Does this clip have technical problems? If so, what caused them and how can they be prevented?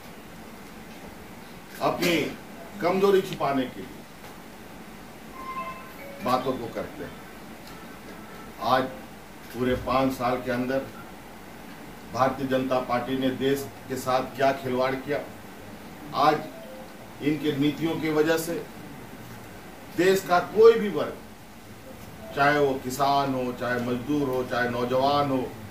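Yes. Throughout, a grainy distortion rises and falls with the sound, likely low bit depth without dither: truncation to 8 bits leaves error roughly 30 dB below the signal. Unlike steady hiss, it tracks the sound, gritting up quiet passages and vanishing in silence. Prevent it by keeping at least 16 bits and applying dither whenever word length is reduced.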